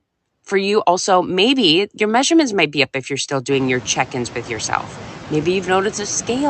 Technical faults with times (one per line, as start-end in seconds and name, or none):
0.00-6.49 noise suppressor artifacts